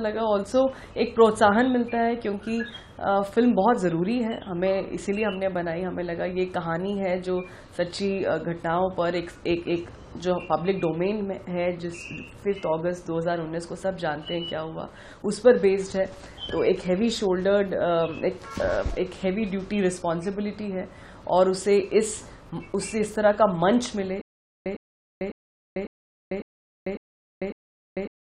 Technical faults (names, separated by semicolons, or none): stutter with silent gaps